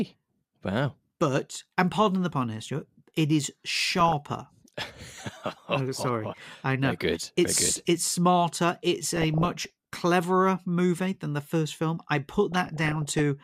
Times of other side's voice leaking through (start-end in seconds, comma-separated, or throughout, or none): none